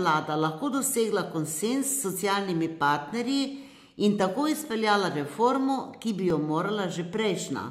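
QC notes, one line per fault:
1.5–6.3 s, clock drift buffer slips: regular clicks every 1.6 s in the speech, likely from two clocks mismatched by roughly 500 ppm, dropping or repeating a few dozen samples.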